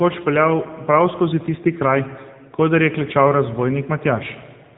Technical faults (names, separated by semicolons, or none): AMR narrowband mobile codec